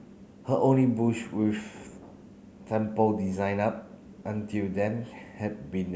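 No technical faults can be heard anywhere in the speech.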